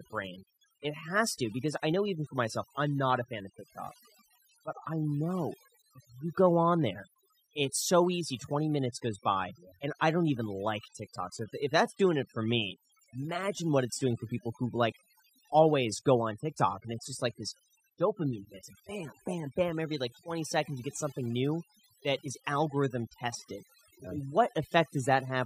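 Overdone noise removal runs through the whole speech clip. A noise reduction stage was set too strong. It pulls single frequency bands down or out whenever they sit near its noise estimate. The background drops and breaks up into twinkling specks. Quiet parts of the voice vanish too.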